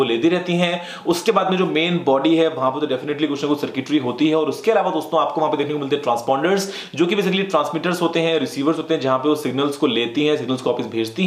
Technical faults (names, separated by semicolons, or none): none